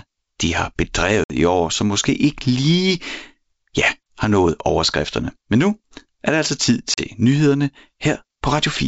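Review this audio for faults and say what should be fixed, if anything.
Packet loss on an ADPCM call at 1.24–1.34 s (60 ms lost) and 6.94–7.06 s (40 ms lost) leaves hard-edged silent holes. Unlike a clean dropout, the sound then returns slightly distorted while the decoder's predictor and step size drift back into step with the sender's. Packet loss concealment that also resets the decoder state, along with redundant transmission, would prevent it.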